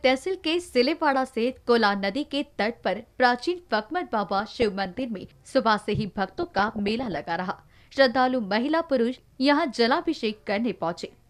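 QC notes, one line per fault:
4.37–5.05 s and 6.28–7.25 s, DAB burbling: residual bit errors corrupt MP2 sample and scale-factor data, so individual sub-bands jump in level frame by frame, giving short blips of noise in single sub-bands. The spectrogram shows scattered bright rectangular blocks in isolated frequency bands, consistent with a bit error rate below about one percent.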